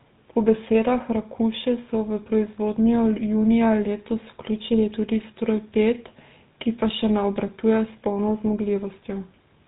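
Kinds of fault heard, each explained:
GSM full-rate codec, throughout: the speech passes through a vocal-tract model driven by a sparse, regularly spaced pulse excitation, which fits a 13 kbps full-rate coder. Nothing above 4 kHz survives, and a buzzy, gravelly roughness is plainly audible across the clip.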